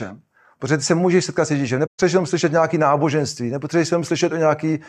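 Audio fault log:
1.86–2.00 s, AAC frame loss with muting: the speech drops into a silent gap of about 128 ms just before "jenom slyšet nějaké náboženství". The decoder had no data for this stretch and filled those frames with a zeroed spectrum. Because AAC reconstructs audio from overlapping windows, the sound fades down into the hole and back up out of it over roughly one frame at each edge. The result is a soft-edged dropout. A gap of this length points to about six consecutive lost frames.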